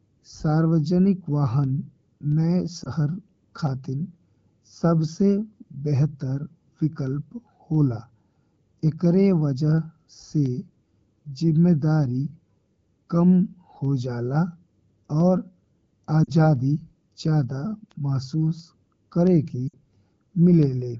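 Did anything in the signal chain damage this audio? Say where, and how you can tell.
Yes. Lost AMR speech frames on the radio link: gaps of 20, 40 and 60 ms at 2.84, 16.23 and 19.68 s show as frozen, smeared harmonics fading in the spectrogram while the AMR-WB decoder repeats its last good parameters.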